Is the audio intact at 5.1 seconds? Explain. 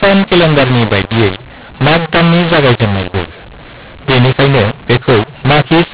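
No. At 5.1 seconds, as throughout the clip, the speech suffers a mu-law and A-law mix-up: samples coded as mu-law are decoded as A-law, scrambling levels so the sound turns harsh and pauses hiss. The waveform shows distorted peaks and a raised noise floor between phrases. The spectrogram shows smeared broadband grit below the 4 kHz telephone ceiling.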